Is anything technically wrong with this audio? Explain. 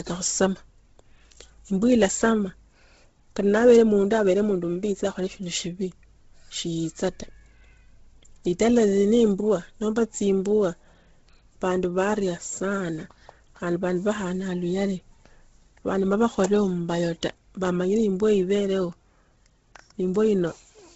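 Yes. Throughout the speech, the sound is heavily degraded and has nothing above 7.6 kHz, likely from Bluetooth LC3 compression at a low bitrate, consistent with roughly 16 kbps. The codec discards much of the upper spectrum and patches it with noise, leaving a breathy, grainy edge on the speech.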